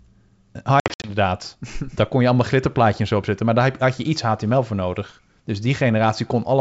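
From 0.80 to 1.11 s, packet loss on an ADPCM call leaves 160 ms of sharp-edged silent gaps, with the longest run 60 ms. On a spectrogram or waveform these show as blank vertical slots. After each gap the speech returns slightly distorted while the predictor resynchronises.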